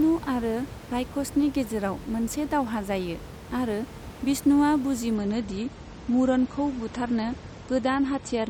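Speech recording with a bit of room noise underneath, sitting about 16 dB below the voice. At 5.15 s it switches abruptly to an adaptive stream at a lower bitrate and stays there to the end at 8.50 s. The top end disappears, with nothing above 8.4 kHz, and the sound gets thinner and more smeared, with no gap at the switch. That sounds like the player dropping from a 128 to a 32 kbit/s MP3 rendition after the connection slowed.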